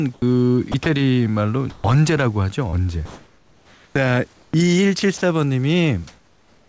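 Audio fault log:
0.14–0.86 s and 2.70–4.54 s: sound chopped by the voice detector. Sending switches on and off repeatedly, likely from the voice detector, so speech turns choppy. About 120 ms, then about 1.1 s, goes to comfort noise.
1.70–1.84 s and 5.18–5.22 s: sound dropped by the voice detector. A quiet stretch is likely mistaken for background and not sent. Speech is lost for 110 ms, then 40 ms, giving way to comfort noise before returning.
6.07–6.69 s: comfort noise in place of the background. With speech over, discontinuous transmission likely replaces the real room noise with featureless synthetic noise about 2 dB quieter. No speech is lost.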